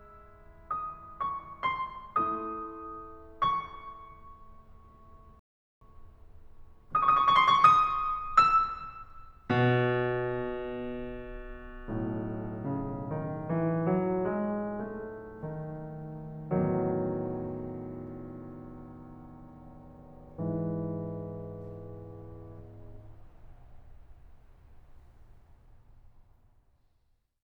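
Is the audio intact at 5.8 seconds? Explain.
No, 5.8 seconds falls inside a rebuffering stall from 5.39 to 5.81 s: the player used up its downloaded audio and paused until more arrived. The music drops to silence for about 0.42 s, then picks up exactly where it stopped, with nothing missing.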